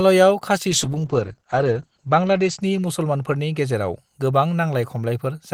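From 0.71 to 4.03 s, a call bitrate drop muffles the speech to below 8 kHz and roughens it; unlike packet loss, it never breaks up.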